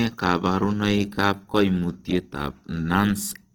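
Throughout the speech, the sound is grainy and rough, with a noisy hiss woven into the tones, though the bandwidth stays full up to 20 kHz. This is likely Opus compression in its music mode, filling starved bands with noise, which fits a rate around 16 kbps.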